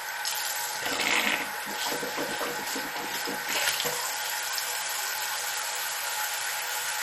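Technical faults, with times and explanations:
Throughout, MP2 compression: dull, gurgling and granular, nothing above 16.1 kHz, likely a low bitrate near 56 kbps switching off and coarsely quantising sub-bands.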